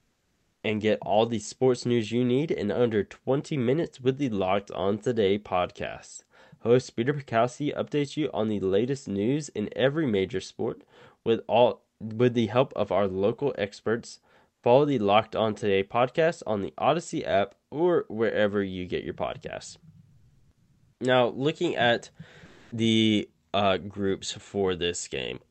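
Comfort noise in place of the background occurs at 0.0–0.63 s, at 14.53–14.63 s after "of our local experts", at 20.11–20.99 s after "you get your podcasts", and at 22.45–22.71 s between "looking at" and "the uh groups". In these pauses the real room tone becomes a steady, featureless hiss, likely because discontinuous transmission stopped sending audio and the receiver synthesised shaped noise to fill the gap. The level changes at three of them: about 5 dB quieter at 0.0 s, about 17 dB quieter at 14.5 s and about 8 dB louder at 22.5 s.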